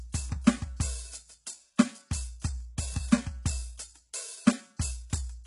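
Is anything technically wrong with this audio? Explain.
Yes. Throughout the music there is heavy damage consistent with HE-AAC compression, likely at a very low bitrate around 12 kbps. Nothing is present above 11.1 kHz. The top of the band sounds synthetic. Only the lower spectrum is genuinely coded, and the treble is rebuilt by shifting lower bands upward under a coarse envelope. The regenerated harmonics therefore fail to line up across the crossover, and cymbals and sibilant content come out gritty and metallic.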